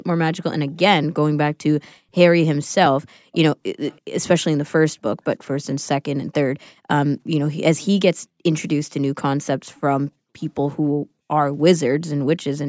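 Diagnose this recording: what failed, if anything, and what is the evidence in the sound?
Echo leak at 3.32 to 3.38 s and 3.88 to 4.01 s: two short, faint scraps of the speech return about 30 dB down, trailing by 328 ms. This points to the call processing stage, likely a far-end echo canceller passing residual loudspeaker pickup back.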